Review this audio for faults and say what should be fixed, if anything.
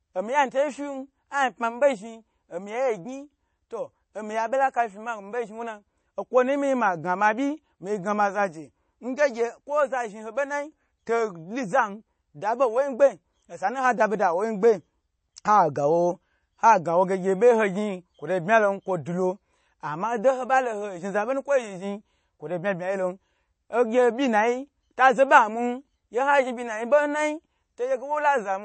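The speech was likely squeezed through MP3 compression at a low bitrate, around 32 kbps, for the whole clip. With so few bits, the encoder cuts everything above 8.3 kHz and discards weaker frequency detail, which flickers in and out from frame to frame. The result is a dull top end lacking crisp sibilance, with a watery, swirling texture and softened consonant attacks plainly audible throughout. Preventing this means keeping an uncompressed or high-bitrate master and exporting at a bitrate high enough to preserve content well above 8.3 kHz.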